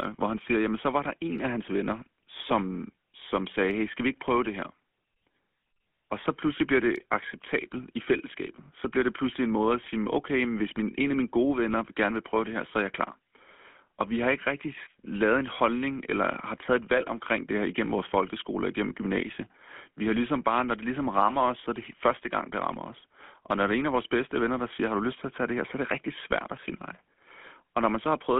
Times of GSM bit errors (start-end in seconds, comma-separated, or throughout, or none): 7.42-7.49